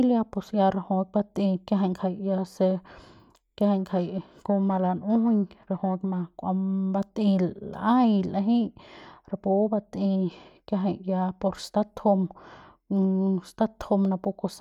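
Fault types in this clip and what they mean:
Periodic clock jitter: From 3.79 to 6.22 s the converter's sampling clock wobbles at a steady rate of about 1 kHz. Each component of the speech gains sidebands about 1 kHz above and below it, strongest at higher frequencies. This gives a rough, metallic edge.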